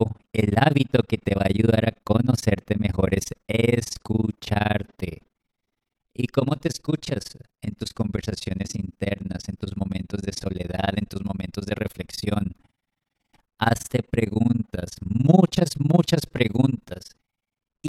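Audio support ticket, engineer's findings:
Overlap-add ripple across the full speech clip. Symptom: fast, rough flutter, tremolo at around 20 Hz, level dipping by about 60 dB each cycle. Probable component: frame-based processing stage, resynthesis step. Mechanism: windowed frames recombined with an overlap whose window gains don't sum flat, so level swings once per frame.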